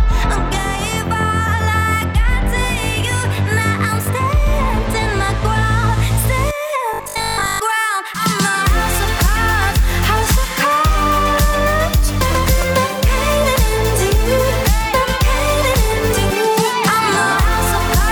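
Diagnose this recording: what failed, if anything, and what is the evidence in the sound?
Robotic sound from repeated short buffers, 6.94 to 7.62 s. A rigid 50 Hz buzz replaces most audio. Likely driver buffer starvation, looping 20 ms chunks.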